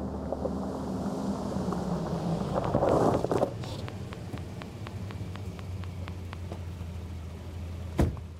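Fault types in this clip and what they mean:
Train of clicks: Similar clicks tick over the sound from 2.65 to 6.34 s. They arrive at a regular pace of 4.1 per second, around fifteen in all, standing about 15 dB above the sound. The likely source is outside interference, a faulty connection or a power supply fault.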